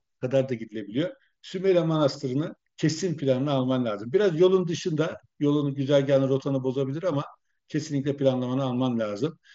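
Speech over an mSBC Bluetooth headset link, band-limited to about 7.7 kHz, with no technical faults detected.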